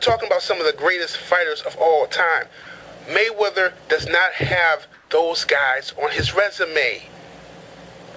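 From 4.94 to 5.09 s, the real background, about 36 dB below the loud parts, is swapped for a steady, featureless hiss within about 1 dB of its level, likely comfort noise in place of the background; unlike a dropout, the gap is filled rather than silent.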